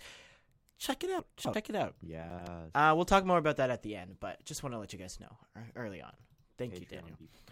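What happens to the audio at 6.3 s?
Nothing goes wrong at 6.3 s; the speech there plays through intact, with no dropout, click, distortion or other fault.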